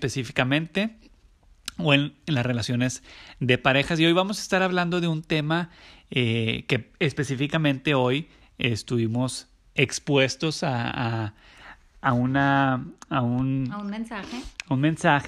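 From 12.22 s to the end of the speech at 15.28 s, de-emphasis has been applied wrongly. A treble-cut filter meant to reverse pre-emphasis acted on audio that never had that boost, or was applied a second time, so the highs roll off smoothly, by about 8 dB at 10 kHz relative to 1 kHz. The speech turns dull and muffled, with softened sibilance. On a spectrogram, energy above a few kHz fades abruptly at 12.22 s. The waveform shows fewer fine, spiky details.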